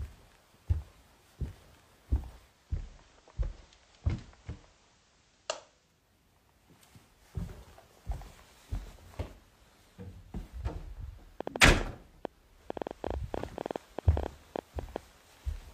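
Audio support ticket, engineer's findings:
Digital radio blending to analogue, 2.35–6.15 s. Receiver lost the digital stream and cross-faded over about 470 ms to the station's FM feed, then back. Hiss rises, roughly 30 dB below the programme; level drops about 2 dB. Spectrogram: raised broadband noise floor across the span.

Train of clicks, 11.41–14.97 s. Around forty sharp, similar pulses at about 9.6 per second, unevenly spaced, standing out well above the sound, on the order of 15 dB. Likely interference from nearby equipment or a struggling interface. Waveform: isolated vertical spikes; spectrogram: thin full-height vertical lines at irregular intervals.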